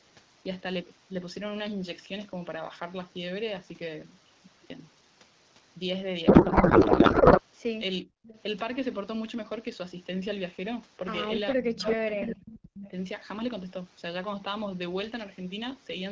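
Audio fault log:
6.27–7.41 s, codec payload misread: the speech turns into garbled noise and warble that barely tracks it. This fits octet-aligned AMR frames being unpacked as bandwidth-efficient, so every field is read from the wrong bits. On a spectrogram the formant structure gives way to smeared broadband texture with abrupt edges at both ends.
8.03–8.22 s, speech suppressed in double talk: the level dips sharply, by roughly 40 dB at its deepest, for about a tenth of a second. This is likely the echo canceller muting while both sides spoke. The waveform shows a brief near-flat notch.
8.23–8.42 s, echo leak: a faint delayed copy of the speech, about 20 dB down and 451 ms late, likely loudspeaker pickup the canceller failed to remove. The spectrogram shows a weak ghost of earlier harmonics.
11.55–12.93 s, speech suppressed in double talk: over roughly one and a half seconds the speech repeatedly drops and thins, by as much as about 35 dB. 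This is likely suppression during overlapping talk, and it shows as a chopped waveform envelope with high frequencies missing in patches.
11.82 s, 12.17 s and 12.78 s, echo leak: three short scraps of speech return 558 ms late. The first is about 5 dB louder than the speech, the second about 5 dB below it, and the third about 15 dB below. They are likely residual loudspeaker echo, and each appears as a short repeated harmonic pattern shifted in time.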